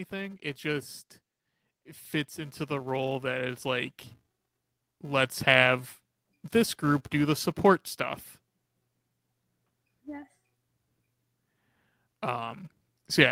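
A filter restarted on every block runs through the whole of this speech recording: its internal state is discarded at each block boundary, so every block starts from silence and opens with a small transient. Those repeated transients merge into a steady buzz at 375 Hz, which fits a 128-sample block, and the buzz grows and shrinks with the level of the speech rather than sitting at a fixed volume. On top of this, automatic gain rising begins at 0.09 s and continues until 12.64 s: the gain control judged the input too quiet and kept raising its gain, by about 13 dB overall. The voice and the background swell together over that long span, and the block-rate buzz gets louder along with them as the level climbs.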